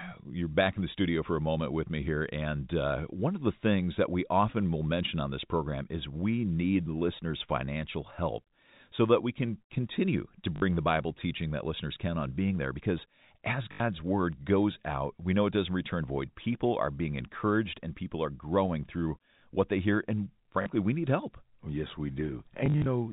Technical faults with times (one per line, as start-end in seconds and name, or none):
10.56-10.62 packet loss with last packet repeated
13.72-13.80 packet loss with last packet repeated
20.62-20.66 packet loss with last packet repeated
22.66-22.86 packet loss with last packet repeated